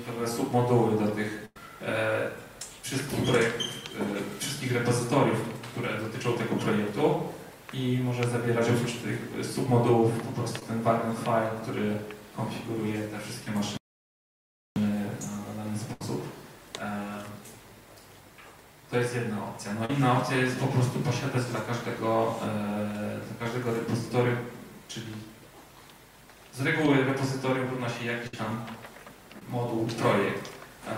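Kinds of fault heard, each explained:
Burst of packet loss: A run of audio arrived too late or not at all, and the receiver stretched the last sound while fading it. Gaps of about 100, 70 and 60 ms occur, the first ending in brief silence.
Short concealed packet loss: Tiny dropouts, 10 to 40 ms, were patched by continuing the preceding sound and blending back. They pass as brief smears or wobbles near 10.59, 19.85, 23.44 and 29.39 s, where a short sound may vanish.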